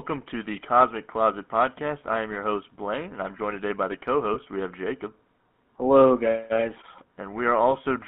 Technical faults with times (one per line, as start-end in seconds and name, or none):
0.00-8.07 GSM full-rate codec
4.34-4.38 lost GSM frames